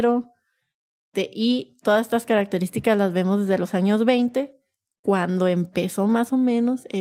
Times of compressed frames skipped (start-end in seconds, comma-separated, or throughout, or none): none